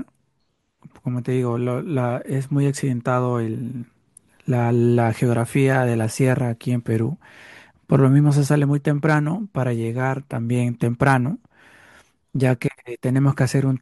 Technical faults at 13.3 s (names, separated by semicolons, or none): none